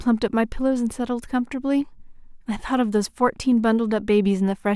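Nothing in the speech stood out as a technical fault on listening.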